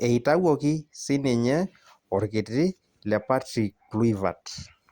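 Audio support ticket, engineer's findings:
No audible faults found in this speech recording.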